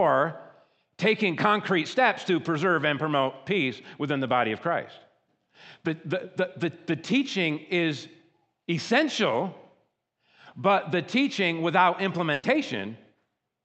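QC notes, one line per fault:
12.33–12.45 s, burst of packet loss: right after "but the teaching without", a run of call packets went missing or arrived too late to play. The receiver covered the hole by extending the last sound and fading it, so about 100 ms of stretched, dimming concealment fills the gap. When real audio returns, roughly 100 ms of the original has been skipped. The path's Opus coding, with content capped near 8 kHz, colours the concealed stretch too.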